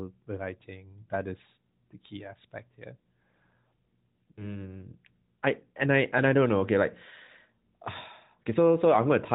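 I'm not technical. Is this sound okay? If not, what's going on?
No. At 1.02 to 1.09 s and 4.32 to 4.64 s you hear lost AMR speech frames: the phone line briefly smears and fades the sound instead of cutting to sudden silence, then it returns weak.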